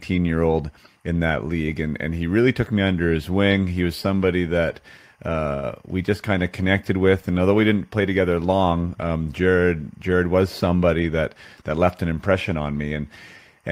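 At 5.53 s the speech stalls for about 0.13 s, to 5.66 s. A short buzzy continuation of the last sound fills roughly 101 ms without falling to silence, and then the speech resumes exactly where it stopped. That pattern points to a call audio freeze, likely caused by delayed packets running the jitter buffer dry. Unlike a packet-loss dropout, nothing is skipped. The gap only pushes everything after it about 0.1 s later.

From 10.74 to 11.22 s the speech rushes at about 116% of normal speed, a jitter buffer speed-up. The receiver had built up excess delay and trimmed it by cutting out short pitch-period slices back to back, removing about a tenth of a second in total. What separates this from a sped-up playback or resampling fault is that the pitch stays where it was. Only the timing compresses, so the passage sounds hurried, not higher.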